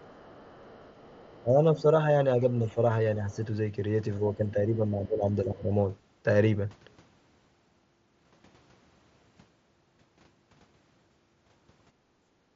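A speech recording in which a faint second voice, roughly 30 dB below the talker, sits under the opening from 0.0 to 1.42 s and returns briefly at 3.31 s. This is likely the other side's voice leaking through, where loudspeaker playback was picked up by the microphone and not fully cancelled. The talker's own level then sags by up to about 10 dB from 1.42 to 1.86 s, about 5 dB at 2.6 to 2.79 s, and about 15 dB across 4.35 to 5.71 s. That is likely speech suppressed in double talk, with the echo canceller turning everything down while both ends spoke. At 7.44 s there is a barely noticeable tiny smear that points to a single dropped packet, smoothed over as concealed Bluetooth headset packet loss by repeating the preceding waveform. From 11.92 to 12.51 s the room tone ducks by about 12 dB and comes back: background gated by the echo canceller, which clamped the microphone while the loudspeaker was active. 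Throughout, the audio keeps the 8 kHz ceiling and light graininess of the mSBC headset link.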